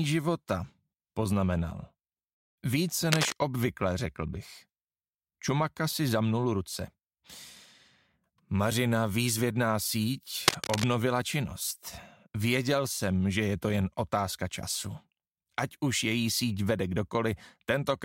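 At 3.12 to 3.33 s and again at 10.48 to 10.84 s, cable scratch noise cuts in as dense, irregular bursts of crackle roughly as loud as the sound itself. The likely cause is a worn cable or connector being moved, its contact resistance fluctuating rapidly.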